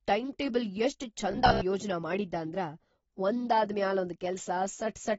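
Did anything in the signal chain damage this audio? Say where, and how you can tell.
Yes. Throughout, the speech sounds dull and smeared with plainly audible codec damage and nothing above 7.7 kHz, likely AAC compression at a low bitrate, consistent with about 24 kbps.

From 1.31 to 1.63 s, between "ಟೈಂಟೇಬಲ್ ಎಷ್ಟ್" and "ಯೋಜ್ನ ಮಾಡಿದ್ದಾಂದ್ರ", the sound turns to a rigid 66.7 Hz buzz, likely robotic sound from repeated short buffers. Roughly half the audio there is repeated 15 ms chunks.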